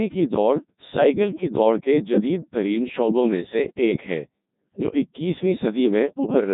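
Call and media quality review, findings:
Codec 2 vocoder throughout. Waveform discarded; decoder resynthesises speech as sine waves from pitch, voicing, energy and spectral envelope, a rate consistent with about 1.2 kbit/s. Heavily robotic, buzzy speech; nothing above 3.8 kHz.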